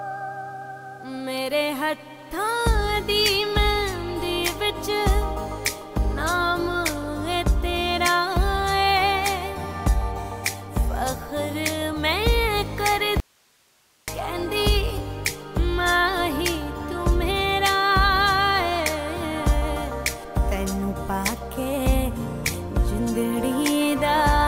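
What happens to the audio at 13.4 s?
At 13.4 s the sound is in an audio dropout to a faint residue. It cuts out abruptly at 13.2 s and returns at 14.08 s, a gap of about 0.88 s. Only hiss remains, roughly 40 dB below the signal. The source was likely lost while the path after it stayed live.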